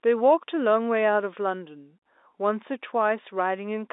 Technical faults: none

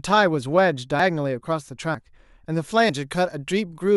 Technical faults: audio missing between chunks

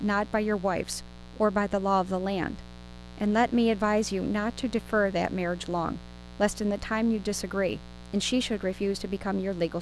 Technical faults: mains buzz

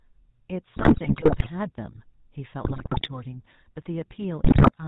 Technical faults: GSM full-rate codec; GSM bit errors

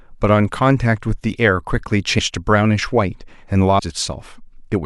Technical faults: compressed frames skipped

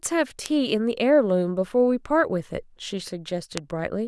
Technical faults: bit error spike

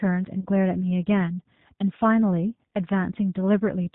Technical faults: G.729 codec; VoIP packet loss concealed by the speech codec

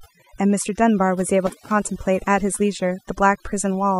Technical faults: overdone noise removal; intermittent contact

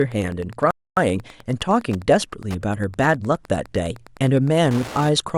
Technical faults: Wi-Fi interference; playback stall

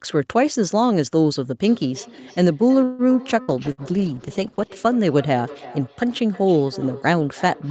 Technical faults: feedback echo between two devices; call audio freeze; burst of packet loss; call bitrate drop

